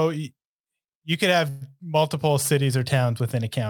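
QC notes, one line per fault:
Throughout, sample clock jitter: a roughness that rises on loud and bright sounds and vanishes in pauses, from timing wobble of a few microseconds, roughly 30 dB down.
1.49 to 1.63 s, call audio freeze: the last sound is stretched as a fading buzz or hiss for about 117 ms, likely a drained jitter buffer, then resumes with nothing lost.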